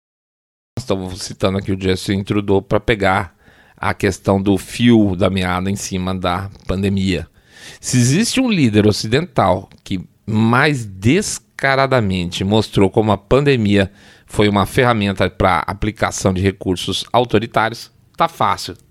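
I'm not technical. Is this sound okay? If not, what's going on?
No. There's a cut-off start: the clip opens with dead silence until 0.77 s, then jumps straight in partway through speech at "estamos citando aqui o". The recording began late, so the first sound has no natural beginning and starts abruptly.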